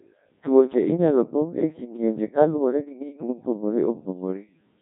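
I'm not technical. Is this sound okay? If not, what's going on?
No. The whole clip sounds robotic and buzzy, like a voice coming through a cheap walkie-talkie, with a heavily damaged, synthetic character from start to finish. This is the Codec 2 vocoder, a very low-rate digital-radio codec. Instead of sending the real voice, it sends only a rough outline of pitch, loudness and tone, and the receiver rebuilds the speech from simple tones. Nothing above 3.7 kHz survives, so the speech also sounds dull and muffled.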